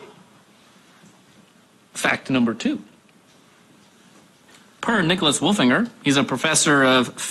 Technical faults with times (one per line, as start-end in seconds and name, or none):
none